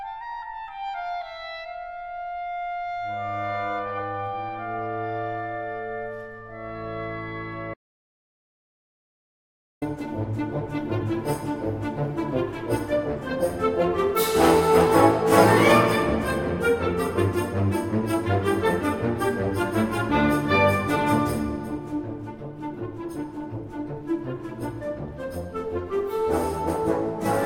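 At 7.74 s the sound cuts off abruptly into total silence, with no room tone at all, and returns at 9.82 s. This audio dropout to silence loses about 2.08 s, likely because the input link failed while recording continued writing zeros.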